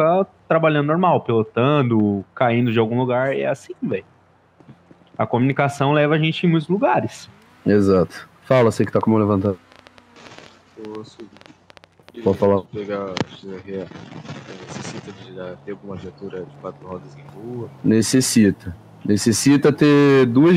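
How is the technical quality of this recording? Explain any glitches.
One fault stands out: a train of clicks from 8.84 s to 12.45 s. Roughly twenty similar pulses, at about 6.4 per second with uneven spacing and peaking near the level of the sound itself, tick over the audio, likely from electrical interference or a faulty connection or power supply.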